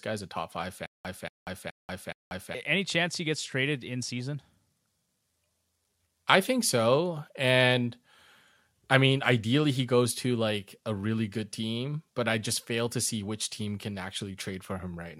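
A speech clip with a stutter with silent gaps from 0.86 to 2.55 s, after "guy's a top five" and before "chance he gets traded". A 235 ms burst repeats four times, each followed by about 186 ms of digital silence, every 421 ms. A stalled player or stream, re-serving its last fragment at each retry, is the likely cause. The audio meant for that span is lost.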